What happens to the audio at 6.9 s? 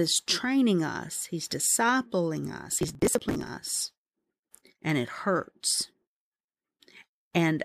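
At 6.9 s the speech carries on intact, with no dropout, click, distortion or other fault at that point.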